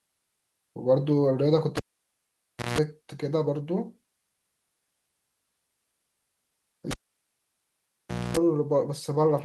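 A live cable was pulled and plugged in twice, at 1.77–2.79 s and 6.91–8.37 s. Each break pops, drops the speech out for 0.97 s and then 1.41 s, and brings 60 Hz mains buzz (170 ms, then 250 ms) as the plug tip touches. A second pop follows as the signal returns.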